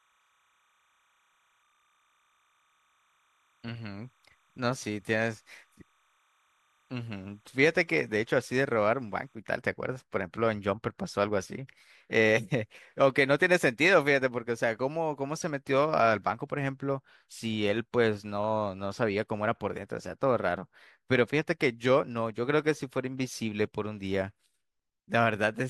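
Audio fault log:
0.0 to 9.35 s, timecode bleed: a linear timecode signal running at 30 frames per second leaks in about 40 dB under the speech. It is a faint chirping warble as the square wave flips between pitches near 1 and 2 kHz. A spectrogram shows steady bands at those frequencies with harmonics above, and the waveform shows low-level hash between phrases.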